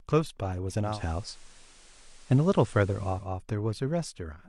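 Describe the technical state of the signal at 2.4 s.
At 2.4 s the speech is mid-way through a digital radio blend to analogue, lasting from 0.82 s to 3.30 s. The receiver has lost the digital stream and cross-faded over 211 ms to the station's FM broadcast. A steady hiss roughly 30 dB under the speech appears, and the level shifts by about 4 dB. A spectrogram shows a raised noise floor, and the waveform shows a step in envelope at each blend.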